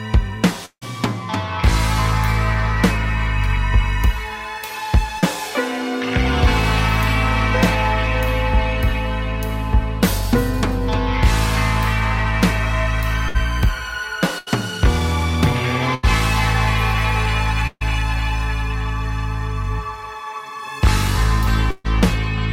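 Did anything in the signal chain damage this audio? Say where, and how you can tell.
Yes, the damage is on the network side, in three related forms.

From 0.65 to 0.83 s there is a long network dropout, likely caused by a network stall. About 160 ms of audio never arrived. The receiver extended the last sound as a decaying buzz or hiss, and the final 70 ms or so fall to silence before the signal returns further on. On a spectrogram the last spectral shape smears into fading, blurred bands and then a dark gap. The waveform shows a shrinking envelope and then a flat line.

At 5.19 to 5.24 s there is a short concealed packet loss. Roughly 40 ms failed to reach the decoder in time, and concealment synthesised about 30 ms to bridge the hole before crossfading back into the real signal. It comes across as a brief smear or wobble. On a spectrogram it shows as a short, slightly blurred column where the fine detail goes soft. 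The waveform shows a small, too-regular stretch.

A burst of packet loss occurs at 13.28 to 13.36 s (60 ms missing), 14.38 to 14.48 s (80 ms), 15.94 to 16.05 s (80 ms), 17.67 to 17.83 s (140 ms) and 21.71 to 21.86 s (140 ms). In each gap several consecutive packets were lost, and the receiver repeated the last sound at falling level, heard as a held buzz or fading hiss. The 17.67 s gap ends in about 40 ms of silence. The spectrogram shows stretched, fading harmonics, and the waveform shows decaying repeated cycles.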